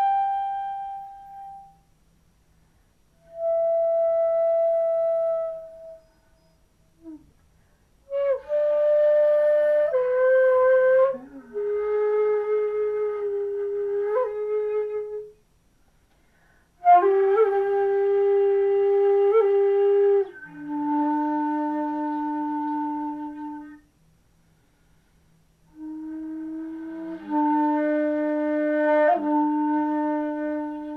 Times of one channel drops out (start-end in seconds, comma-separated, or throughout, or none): none